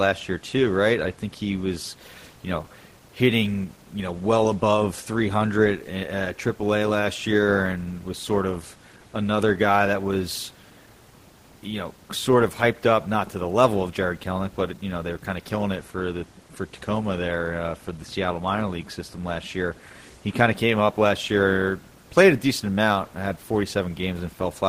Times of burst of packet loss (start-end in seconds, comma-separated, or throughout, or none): none